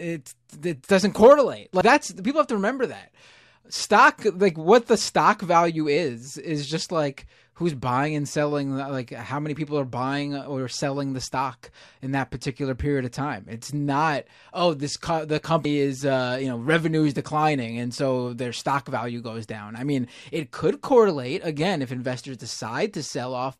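A speech clip with two dropped buffers (overrun). At 1.81 s a jump leads into "that's people have to". At 15.65 s another jump lands on "is uh you know". Each skips ahead without silence, losing roughly a tenth of a second or more. Likely the samples were overwritten before being read.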